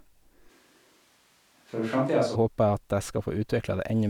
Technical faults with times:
0.50-2.34 switch to a distant microphone

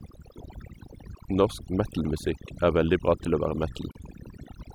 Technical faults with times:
0.00-4.74 overdone noise removal
3.92-3.95 gap at a join of encoded pieces

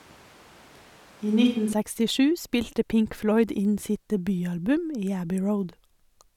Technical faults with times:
0.00-1.73 switch to a distant microphone

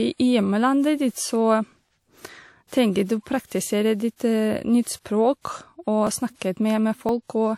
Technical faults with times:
5.05-7.09 periodic USB or driver dropouts

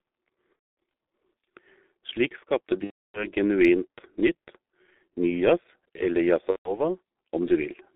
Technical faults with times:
0.00-7.96 G.723.1 codec
0.57-0.62 VoIP packet loss concealed by the speech codec
2.84-3.26 VoIP packet loss concealed by the speech codec
6.50-6.80 VoIP packet loss concealed by the speech codec

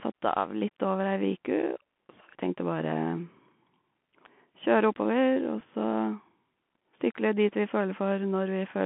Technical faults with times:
0.00-8.85 Bluetooth CVSD headset codec
5.60 Bluetooth headset packet repeated

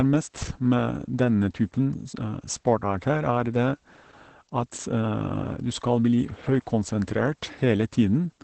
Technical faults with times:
0.00-8.44 Opus voice compression

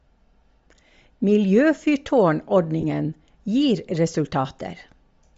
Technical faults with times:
0.00-5.38 Bluetooth LC3 compression
2.81-2.84 lost LE Audio frames

